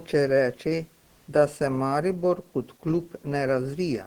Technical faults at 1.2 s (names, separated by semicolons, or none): comfort noise in place of the background